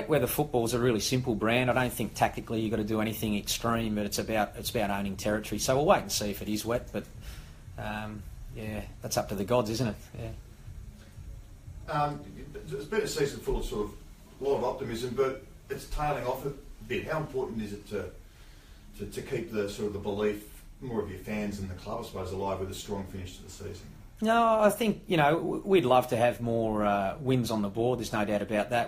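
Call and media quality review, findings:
Nothing turned up on this one: no dropouts, clicks, glitches or level jumps to chase, so there's no component to point at.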